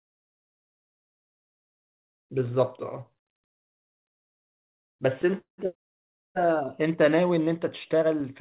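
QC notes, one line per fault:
3.1–4.03 s, repeated stalls (stutter): packets kept arriving late, so the jitter buffer ran dry seven times, the longest wait 70 ms. The receiver stretched the last sound through each gap, about 187 ms in all, roughly a fifth of the span, so the speech drags and stutters with nothing lost.
5.38–5.60 s, call audio freeze: the buffer emptied, likely because packets were held up in transit. The receiver extended the last sound and let it fade, leaving about 120 ms of silence within a 198 ms gap before the speech resumes where it stopped.
6.66–7.39 s, jitter buffer slow-down: the buffer was rebuilding its reserve, so it repeated single pitch periods back to back, adding 68 ms. Speech in this stretch plays at 91% speed with unchanged pitch, so sounds are drawn out, with a slight warble at times.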